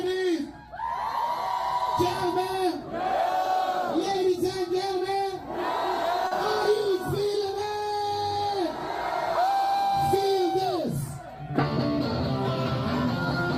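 At 6.27 to 6.34 s there is a short concealed packet loss: about 40 ms of audio arrived too late, so the receiver extended the preceding sound and crossfaded back. It is heard as a brief smear rather than the silent gap a plain dropout would leave.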